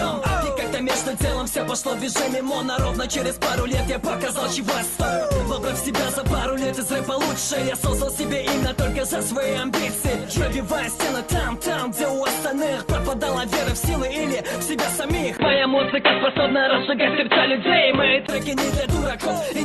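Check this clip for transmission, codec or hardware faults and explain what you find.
One fault, from 15.37 to 18.29 s: the input likely switched to a poorer device. The new input passes nothing above 4.1 kHz, so the sound turns dull and boxy compared with the roughly 12 kHz band of the call path around it. A 20 ms gap marks the switch, the level shifts by about 5 dB, and a fresh noise floor appears roughly 30 dB under the signal.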